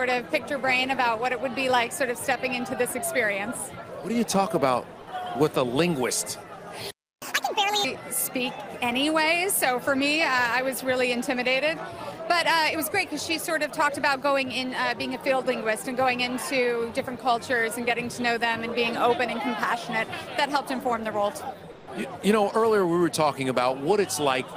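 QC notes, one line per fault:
6.91 to 7.22 s, playback stall. The sound stops mid-flow and the output goes silent for about 313 ms. The gap is too long to be a dropout of a few samples. It is likely a player that ran out of buffered data or had its audio thread blocked. Output resumes only once the player recovers. The sound picks up again straight after the silence.
7.22 to 7.85 s, catch-up at higher speed. Right after the stall, the sound runs at 1.5 times normal speed for about 0.63 s. Pitch rises with it by about seven semitones, so the passage sounds hurried and shifted upward. The player is resampling its backlog to win back the time lost in the gap. Speed and pitch then drop back to normal at 7.85 s.
21.73 to 21.85 s, comfort noise in place of the background. For 120 ms the real background, which sits about 23 dB below the loudest parts, gives way to a steady, featureless noise. 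It is about 3 dB quieter and has none of the original detail. The likely cause is discontinuous transmission, which fits Opus DTX. The sender stops sending during the pause, and the receiver fills the gap with synthetic noise.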